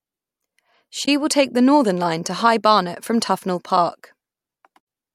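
Speech with two brief glitches from damaged data in a compressed stream, at 1.05 to 1.08 s and 4.77 to 4.81 s, where the decoder misreads corrupted frames and loses sync. Each shows as a thin vertical streak on a spectrogram and a sudden discontinuity in the waveform.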